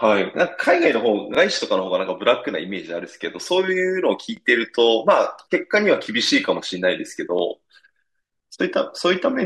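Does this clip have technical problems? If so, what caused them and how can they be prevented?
Yes. The speech has overlapping chunks: a brief stutter at 1.35–1.37 s, 4.37–4.39 s and 7.39–7.41 s. The audio was handled in 3.0 s chunks, and each chunk began about 21 ms before the previous one ended, so that sliver plays twice at every join. Unlike a dropout, nothing goes missing; the sound doubles, at strictly regular spacing. Prevent it by making each chunk start exactly where the last one ended, or by crossfading any intended overlap.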